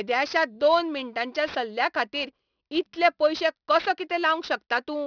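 Aliasing runs through the whole speech clip. Sibilants sound gritty and metallic, with false tones folded back below a 5.5 kHz band edge, which fits a drop to about 11 kHz sampling without a proper anti-alias filter. Plain band-limiting would only dull the sound; here the spurious energy sits around 20 dB under the speech.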